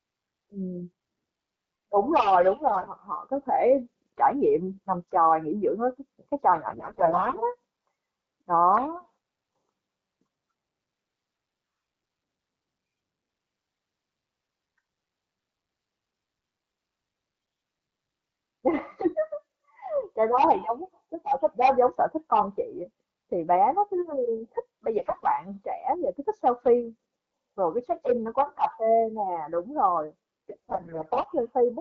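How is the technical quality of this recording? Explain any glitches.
The recording has four short bursts of damage on a wideband AMR-WB path whose light coding softness fits a 12.65 kbit/s rate. AMR bit errors occur at 2.68–2.90 s, 6.68–7.44 s, 24.97–25.25 s and 30.50–31.28 s. Corrupted low-priority bits misplace excitation pulses and skew gain and spectrum, so speech turns hoarse and gargly. The burst at 25 s is the mildest.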